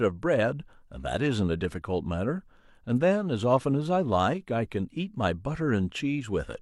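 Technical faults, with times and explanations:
Nothing technical stands out here, just the speech coming through as it should with no dropouts, glitches or other trouble to point to.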